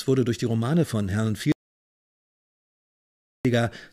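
The input feed was likely cut off at 1.52 s while recording continued, writing silence: an audio dropout to silence. The sound stops abruptly and gives way to total silence with no room tone until 3.45 s, so about 1.93 s of audio is lost.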